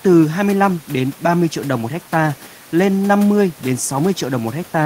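No faults detected in the speech; the only background is ordinary room noise sitting about 25 dB below the talker.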